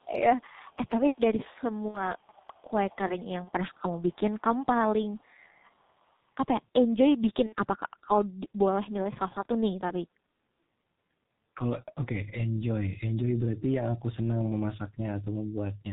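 Throughout, the G.723.1 codec at 6.3 kbit/s cuts everything above 4 kHz. The speech sounds muffled and hoarse, and consonants blur together.

From 0.0 to 0.05 s and again from 0.46 to 0.89 s, a very faint copy of the speech trails about 368 ms behind. This is likely echo leak: a loudspeaker's output reached a microphone and the echo canceller missed it.

At 1.88 to 2.07 s, VoIP packet loss concealed by the speech codec stretches the sound into a buzzy tone or a coloured noise that fades. About 60 ms is missing, which fits two lost 30 ms frames. The voice stays weak briefly afterwards.

From 2.18 to 3.8 s, the delayed echo returns, louder this time but still faint. Inside that stretch, at 3.44 to 3.51 s, a 30 ms gap is bridged the same way.

At 7.47 to 7.55 s, another 60 ms loss leaves a short fading patch before the speech recovers.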